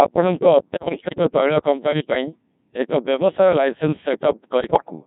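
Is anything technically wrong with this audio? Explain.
Yes. The speech runs through the Codec 2 vocoder for its whole length, and digital voice radio bit errors strike it twice.

The Codec 2 vocoder throws away the original waveform. It transmits only pitch, voicing, energy and a coarse spectral envelope, and the receiver rebuilds the voice from sine waves. The heavy damage here fits a 1.6 kbit/s mode. Every syllable comes out robotic and buzzy, with the natural texture of the voice replaced by a synthetic, reedy tone.

Bit errors on digital voice radio occur from 0.76 to 1.18 s, just before "ତୈଳ କମ୍ପାନୀ ପାଇଁ", and again from 4.64 to 4.90 s. Corrupted bits, around one in ten, reached the decoder. At this low bitrate each bit steers the pitch, level, voicing or spectrum of a whole frame, so every flip rebuilds that frame wrongly. In both stretches the voice lurches in pitch and loudness, its tone colour shifts abruptly, and it breaks into warbling, bleeping gibberish.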